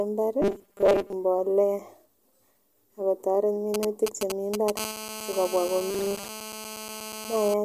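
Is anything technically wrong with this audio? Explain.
Yes, there are three kinds of fault in this speech.

Robotic sound from repeated short buffers, 0.42 to 1.13 s and again 5.90 to 6.27 s: audio likely arrived too seldom, so the same short stretch was replayed in place of most of the real speech. The 200 Hz repetition rate, which fits a 5 ms buffer, imposes a rigid, metallic buzz that only loosely tracks the speech.

GSM signalling bursts, 3.74 to 4.79 s: a nearby 2G phone is signalling, sending intermittent groups of radio bursts that the audio circuit rectifies. This produces a galloping dit-dit-dit of brief 217 Hz buzzes, nearly as loud as the speech.

GSM phone buzz, 4.80 to 7.54 s: a nearby 2G phone is in a call and transmits in bursts 217 times per second, and the rectified pulses form a steady, harsh, harmonic-rich 217 Hz buzz about 11 dB below the speech, unrelated to what is being said.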